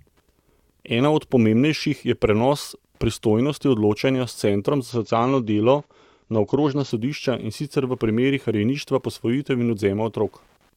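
Throughout the speech, Wi-Fi interference adds faint ticking about ten times a second, matching a 102.4 ms beacon rectified by nearby circuitry, roughly 45 dB below the speech. From 4.91 s to 6.91 s, an adaptive stream at a lower bitrate abruptly dulls the sound, with nothing above 7.7 kHz and rising codec artefacts, which suggests a drop to around 32 kbit/s.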